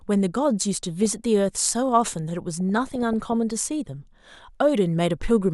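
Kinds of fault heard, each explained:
DAB burbling: at 1.03–1.25 s, 2.60–3.33 s and 5.30 s, weak digital radio reception lets bit errors, a fraction of a percent, escape error correction into the MP2 data, so single sub-bands get short blips of noise or jump in level for up to a frame, over the speech.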